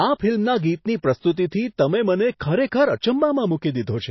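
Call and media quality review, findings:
Throughout, treble gone above 5.8 kHz, watery swirl on sibilants; likely MP3 compression at a bitrate near 24 kbps. Fixed cutoff and frame-to-frame swirl distinguish it from simple low-pass filtering.

Pre-echo at 2.39 s: brief hiss of about 12 ms just before an attack, which sounds smeared. Codec block noise spreading backwards, not a click or dropout.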